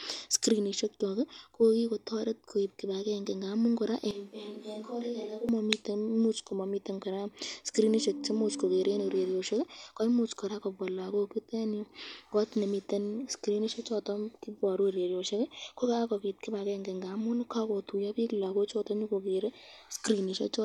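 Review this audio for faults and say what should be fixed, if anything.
From 4.11 to 5.49 s the speech turns suddenly hollow and roomy, with thinner bass, a level around 10 dB lower and room noise only roughly 35 dB beneath it. This is likely a switch to a distant microphone after the close mic's signal dropped out. The waveform envelope shrinks abruptly, and a spectrogram shows weakened low frequencies, smeared reverberant tails and a raised noise floor across that span. Monitor the close microphone's feed during recording and keep a backup close mic running instead of falling back to a distant one.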